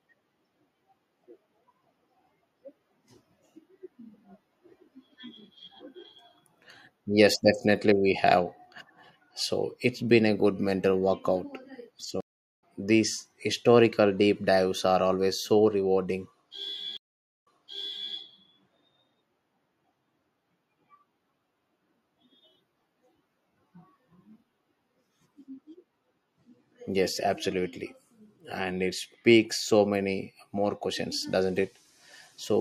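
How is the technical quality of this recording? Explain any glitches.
The speech has two stream reconnect faults. The link dropped and the player restarted its decoder mid-stream. At 12.2–12.64 s, 0.42 s of silence precedes "these historical deep dives", and about 0.3 s of speech is skipped. At 16.97–18.13 s, 0.49 s of silence is followed by a resend that replays 0.67 s of audio.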